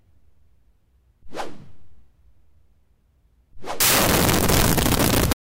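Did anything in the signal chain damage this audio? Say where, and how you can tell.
Yes, at the sample-format conversion stage. From 3.80 s to the end, loud noise swamps the sound, which stays faintly audible, 1.5 times fast and higher in pitch. This is a wrong sample width. 16-bit data were read as packed 24-bit, splicing bytes across samples.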